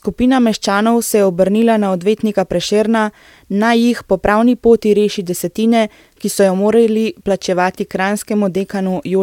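No technical faults can be heard anywhere in the recording.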